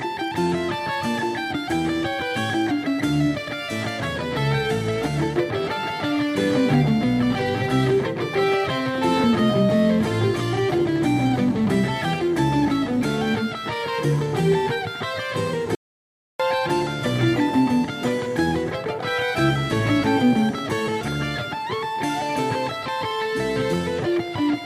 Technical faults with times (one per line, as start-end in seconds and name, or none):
15.75-16.40 audio dropout to silence